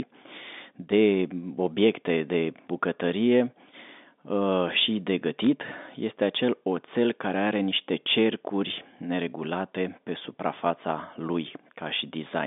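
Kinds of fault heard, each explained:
Bit errors on a digital phone line: a brief burst of crackle from 5.44 to 5.47 s, just after "uh și de". On a G.711 mu-law line, which this narrow 250 Hz to 3.6 kHz band and 64 kbps stream point to, each flipped bit corrupts a single 8-bit sample. Where a sign or high-order bit is hit, that sample jumps far from its neighbours and pops as a sharp tick. The error rate is low, roughly a fifth of a percent.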